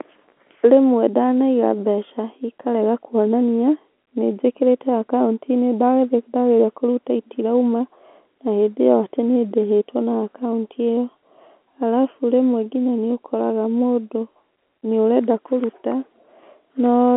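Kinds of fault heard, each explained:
Nothing stood out on listening to this telephone-band speech.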